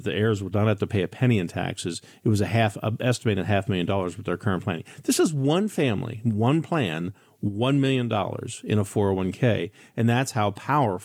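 No technical faults occur at any point in the speech.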